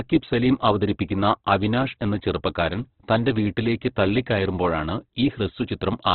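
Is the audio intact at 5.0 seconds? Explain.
No. Speech at 5.0 s carries damage from Opus compression, present throughout. Nothing reaches above 4.4 kHz, and the sound is grainy and rough. That fits likely heavy, low-bitrate coding.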